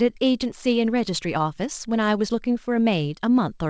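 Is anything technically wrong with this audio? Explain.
No, nothing is technically wrong with this speech: it has been carried over a call connection, and the lack of any content above 8 kHz is simply the normal band limit of a wideband call codec, consistent with G.722 at 64 kbps.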